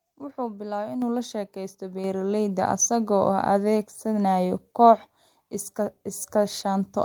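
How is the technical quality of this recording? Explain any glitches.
The recording has two sudden level jumps. At 1.02 s and 2.04 s the microphone volume stepped up, about 6 dB then about 4 dB, so voice and background jump louder together.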